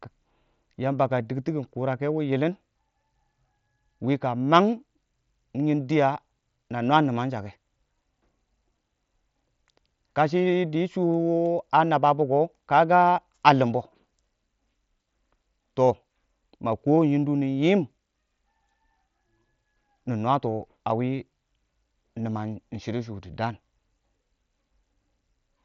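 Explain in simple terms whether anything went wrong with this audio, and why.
Nothing went wrong: the speech comes through a Bluetooth headset using the mSBC codec, which carries sound only up to about 7.7 kHz, so the highest tones are missing in the way that is normal for this kind of wireless headset.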